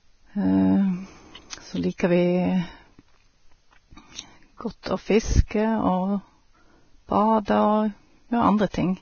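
Heavy lossy coding, likely Vorbis compression at a low rate, runs through the whole clip. The codec quantises the treble so coarsely that fine detail turns to noise and nothing survives above 6.6 kHz, which fits roughly 18 kbps. The speech sounds hissy, grainy and dull.

Pre-echo appears at 1.50 to 1.53 s, 1.98 to 2.00 s, 4.83 to 4.86 s, 5.48 to 5.51 s and 7.45 to 7.48 s. Noise sized for a sharp attack spreads 23 to 32 ms back into the quiet before it, so each onset arrives behind a brief hiss and sounds smeared.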